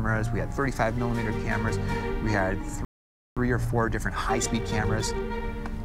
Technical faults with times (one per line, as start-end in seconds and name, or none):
2.85-3.37 playback stall
3.37-5.43 time-compressed catch-up